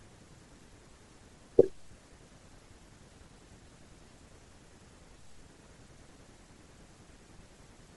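Throughout the speech there is plainly audible codec damage, most likely Bluetooth LC3 compression. LC3 codes short transform frames, here consistent with 10 ms, and at a bitrate around 48 kbps it discards parts of the upper spectrum and substitutes shaped noise there. The result is a breathy, grainy edge on the speech, especially in the higher frequencies, where detail turns to hiss rather than clean harmonics.

From 4.09 to 4.11 s there are lost LE Audio frames, a gap of about 20 ms that fits two missing 10 ms frames. The decoder conceals the gap by repeating the previous spectrum with randomised phase signs instead of passing through the real signal. Because the gap is so short, the concealment never fades toward silence. It is heard as a brief noisy smear where the speech loses its clarity for an instant before normal decoding resumes.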